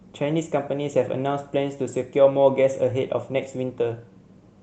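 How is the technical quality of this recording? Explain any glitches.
No audible glitches or faults.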